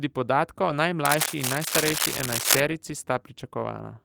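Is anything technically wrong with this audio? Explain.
Yes. This speech clip has two faults.

From 0.65 to 0.71 s there is a lost packet rebuilt from error correction. Two packets went missing. The packets after them carried low-bitrate copies, and the decoder played those instead. So there is no gap. The rebuilt 40 ms sounds rougher and noisier than the surrounding audio. This points to Opus in-band forward error correction filling the hole with a coarser version of the missing frames.

From 1.05 to 2.61 s there is cable scratch noise. Dense, uneven bursts of crackle and rustle sit over the speech for about a second and a half. They are roughly as loud as the speech itself. The likely cause is a worn cable, connector or control being moved. Its contact resistance changes rapidly as it shifts, and that injects the scratching bursts into the signal.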